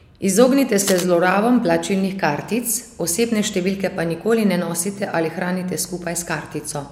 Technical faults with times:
0.87-1.04 cable scratch noise

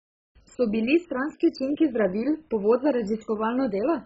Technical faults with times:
0.00-4.05 MP2 compression

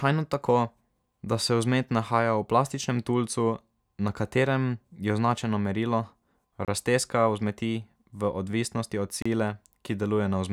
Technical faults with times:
6.65-6.68 block of digital silence
9.22-9.25 block of digital silence

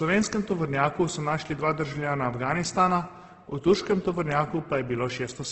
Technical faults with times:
0.00-5.52 Opus compression

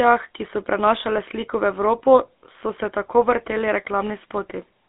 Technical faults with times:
0.00-4.88 GSM full-rate codec

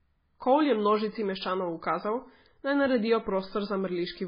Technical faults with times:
0.00-4.28 MP3 compression

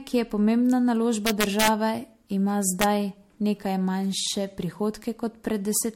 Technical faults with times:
0.00-5.96 generation loss
1.26-1.68 integer overflow
2.81-2.84 integer overflow
5.77 integer overflow

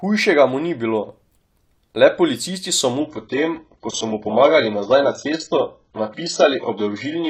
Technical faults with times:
3.00-7.29 adaptive stream at a lower bitrate

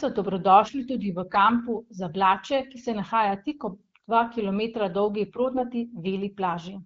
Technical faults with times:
5.54-5.65 AMR bit errors

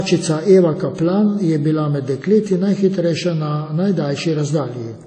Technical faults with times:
0.00-5.06 low-bitrate audio saved at a high bitrate

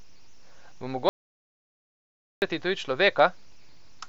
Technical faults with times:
1.09-2.42 audio dropout to silence

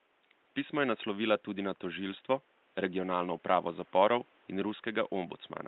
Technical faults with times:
none

